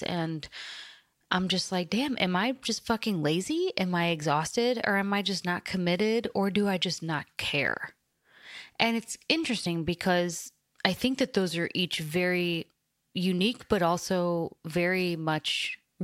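At 9.65 s the speech jumps forward where compressed frames were skipped: about one frame, roughly 30 ms, never played, which fits a 26.1 ms frame. The overlap smears the join into a soft blip. A spectrogram shows a brief vertical discontinuity, not a sharp click.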